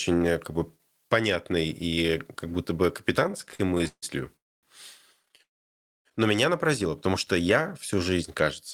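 From 3.23 to 4.04 s the speech has repeated stalls (stutter): about sixteen brief hold-ups, the longest near 146 ms, with roughly 348 ms of filled-in sound making up about 43% of that stretch. Packets kept arriving late, so the jitter buffer emptied over and over and the receiver stretched the last sound each time. It drags and catches without dropping any speech. The stutter is a string of short breaks, unlike a single long hole.

At 4.36 to 4.65 s comes a call audio freeze. The sound stops and hangs, then falls to near silence for about 250 ms before resuming where it left off. The likely cause is packets held up in transit until the buffer ran dry, adding about 266 ms of delay. Unlike the stutter, this is one continuous gap, not many small ones.

A shorter stutter follows from 5.23 to 5.41 s, with six tiny stalls of no more than 12 ms each, about 61 ms in total.

A longer call audio freeze runs from 5.43 to 6.07 s. 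This one has roughly 610 ms of silence and about 623 ms of added delay, again likely from delayed packets. The speech then continues intact.

From 7.42 to 8.46 s a jitter buffer slow-down stretches the speech to about 93% speed, adding roughly 81 ms by repeating single pitch periods or bits of pauses. The pitch stays the same while sounds are drawn out. There are no breaks, which sets it apart from the stutter.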